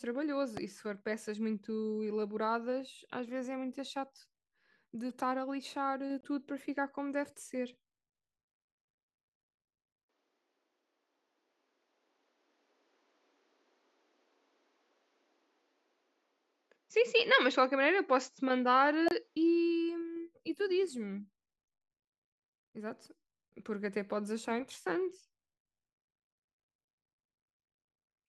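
A loud pop at 0.57–0.59 s in this speech recording jumps about 10 dB above the voice as a single sharp click. It most likely comes from a sudden voltage step, such as a plug, switch or static discharge, added to the signal while the speech carries on underneath. Corrupt frames decoded at 5.09 s, 6.21–6.25 s and 19.06–19.13 s are heard as short chirps, blips or bursts of noise. Damaged compressed data was played back anyway, putting energy at the wrong frequencies for roughly one or two frames each. The last burst is the strongest, at about −20 dBFS, and the earlier two sit near −40 and −50 dBFS. From 10.09 to 19.36 s, the input switched to a poorer device, likely a different microphone or a headset call profile. The sound turns duller, with nothing above 7.6 kHz, and the level shifts by about 5 dB. A new noise floor appears about 45 dB below the speech, and there is no gap at either change.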